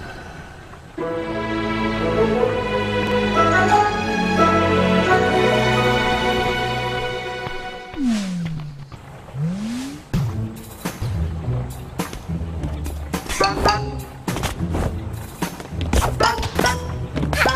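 Chunks out of order: a 42.67 ms block of audio was written one chunk late at 3.03 to 3.12 s and 16.56 to 16.64 s, and two chunks late at 8.70 to 8.83 s. Each swap jumbles the sound briefly, leaving three hard joins.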